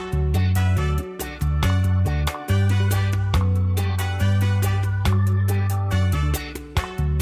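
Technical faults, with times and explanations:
No technical faults are present anywhere in the clip. Nothing in the signal calls for a time or an explanation.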